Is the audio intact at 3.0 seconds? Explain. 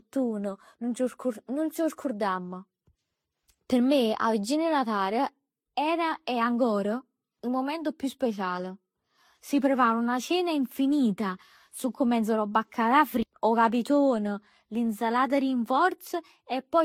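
No. At 3.0 seconds, as across the whole clip, the speech has likely passed through Vorbis, then MP3, then HE-AAC at low bitrates. This is transcoding between lossy codecs. Each stage re-encodes the previous one's artefacts, so smeared, swirly coding noise from the different codecs piles up, and nothing survives above 18.4 kHz.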